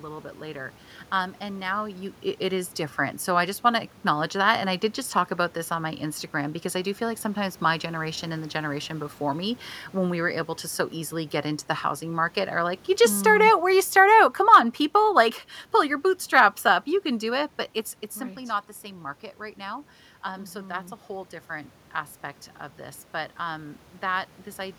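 Automatic gain falling sets in at 12.89 s and runs to 17.43 s, taking the level down by about 6 dB. The automatic gain control judged the input too loud or its background noise too strong and eased its gain back step by step, so the voice starts strong and then sinks, with the room noise behind it sinking by the same amount. That shared drop separates it from the talker moving around 1.5 s and again around 17.5 s, where only the voice changes.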